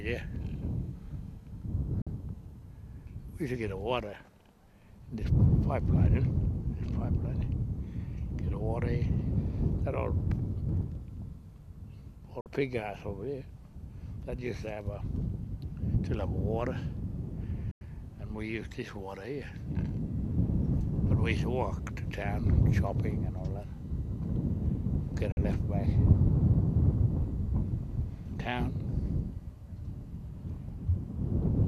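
The audio has four short holes, which is a classic digital broadcast dropout. The receiver lost the signal or rejected corrupted frames and muted until clean ones arrived. The sound fades out over about 3 ms and drops to silence at 2.02–2.07, 12.41–12.46, 17.71–17.81 and 25.32–25.38 s, picking up again further along. Three gaps are 48 ms and the third is 96 ms, which fits whole lost frames of roughly 24 ms each.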